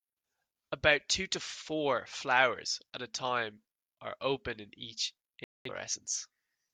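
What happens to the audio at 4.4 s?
Nothing goes wrong at 4.4 s; the speech there plays through intact, with no dropout, click, glitch or other fault at that point.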